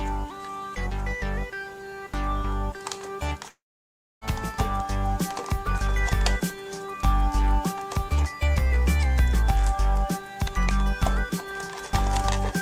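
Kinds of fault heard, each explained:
Clock slip clicks: From 0.26 s to the end, faint ticks recur about every 0.3 s, each the jolt of a single sample dropped or repeated. That spacing points to two unsynchronised clocks differing by roughly 70 ppm, the likely cause. Unlike random codec or dropout glitches, these arrive at a steady, metronomic rate, stand out most on loud or sustained high content, and vanish in silence rather than adding noise of their own.
Long network dropout: Between 3.49 and 4.24 s, about 0.72 s of audio is missing and never recovered, the likely result of a stretch of network packets failing to arrive. The receiver briefly extends the last sound as a fading buzz, then about 0.62 s of near-silence follows before the audio resumes further along. A brief packet-loss glitch would be patched almost seamlessly. Here the concealment gives out and leaves an audible hole.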